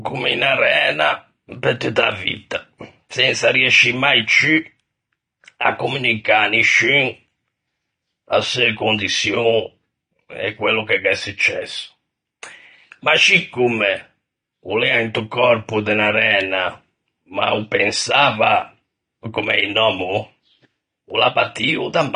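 AAC compression damage runs through the whole clip. All the speech is dull, with nothing above 9.7 kHz, and the codec damage is plainly audible. Sibilants turn fizzy, and sustained sounds warble and smear. The likely cause is AAC-LC coding at a low bitrate, which points to roughly 32 kbps. With so few bits, the encoder drops its cut-off, leaves gaps between bands and quantises the remaining frequency lines coarsely against its hearing model.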